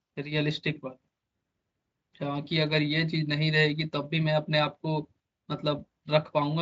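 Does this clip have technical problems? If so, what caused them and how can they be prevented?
No, there are no technical problems in this clip.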